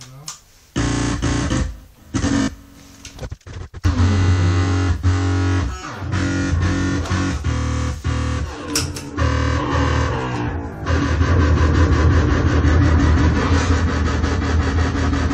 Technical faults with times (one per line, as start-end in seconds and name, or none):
2.42-2.48 Bluetooth stutter